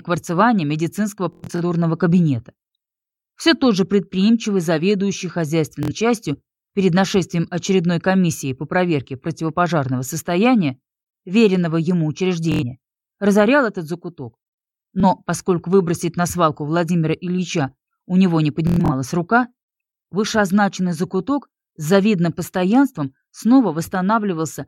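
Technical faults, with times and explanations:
1.33–1.62 s, 5.83–5.92 s, 12.52–12.63 s, 15.00–15.04 s, 18.67–18.92 s: Bluetooth stutter. Late or lost packets make the receiver repeat short slices, consistent with 23 ms packets, producing a machine-gun buzz. The worst bursts are near 1.3 s and 18.7 s, with repeat runs up to about 0.1 s. The sound resumes further along, skipping the missing material.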